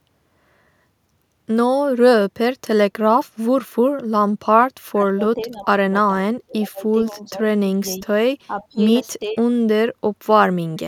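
From 4.91 to 5.93 s the speech dips by up to about 25 dB. This is speech suppressed in double talk. The echo canceller likely turned down both talkers at once.

At 5.05 to 5.1 s a faint echo leak slips through. It is a scrap of voice delayed by 456 ms, about 35 dB below the speech. Residual loudspeaker pickup likely escaped cancellation.

The suppression returns at 6.32 to 6.84 s, 7.11 to 7.41 s, 7.97 to 8.08 s, 8.47 to 8.81 s and 9.22 to 9.4 s. These dips range from about 10 to 30 dB.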